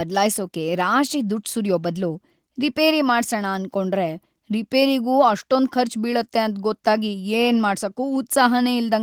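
No technical faults can be heard anywhere in the speech recording, and the signal holds steady throughout.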